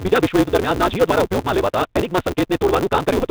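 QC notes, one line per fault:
Throughout, Bluetooth CVSD headset codec: The speech is band-limited, with nothing above 4 kHz, and the coding damage is plainly audible. The sound fits a 64 kbit/s CVSD link, where each sample is a single up-or-down step whose size adapts. Fast, loud high-frequency movements outrun that step, so sibilants turn scratchy and distorted. The constant stepping also leaves a granular hiss under the speech.
Throughout, block size mismatch (truncated): A steady buzz at 188 Hz runs under the speech, and everything plays about 1.88 times faster than normal while the pitch stays roughly where it should be. This points to one stage producing longer blocks than the next consumes, with the next stage reading about 256 samples each time. The tail of every block is discarded, which shortens the timeline, and the regular cut at each block boundary produces the buzz.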